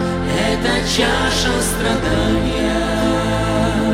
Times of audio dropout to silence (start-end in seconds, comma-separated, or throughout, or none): none